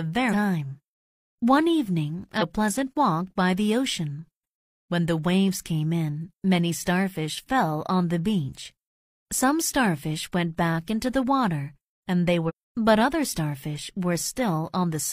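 At 0.28 to 0.34 s, 2.37 to 2.43 s and 12.45 to 12.51 s, the speech breaks into short glitches of about 60 ms each, caused by damaged data in the compressed stream. Corrupted bytes make the decoder misread those frames and lose sync until it finds a valid header. On a spectrogram each appears as a narrow vertical smear of broadband or oddly banded energy, and the waveform shows an abrupt discontinuity at its edges.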